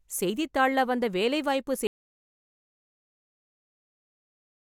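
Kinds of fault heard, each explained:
Audio dropout to silence: the input signal was likely lost through a disconnected device, failed link or mute while recording continued writing silence. After "வந்த வேலை வாய்ப்பு" the speech cuts off at 1.87 s into complete silence, without room tone, through to the end.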